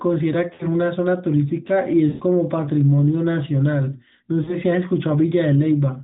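At 0.54 to 0.65 s, 2.10 to 2.22 s and 4.44 to 4.56 s the speech shows lost AMR speech frames. Corrupted frames were discarded, and the decoder filled each gap by reusing the last good pitch and vocal tract settings at falling gain. The sound smears and fades instead of cutting out. The 100 ms gap at 2.10 s sinks furthest toward silence, while the 60 ms and 40 ms gaps sound more like a brief warbling dip. The narrowband AMR band limit below 4 kHz is audible throughout.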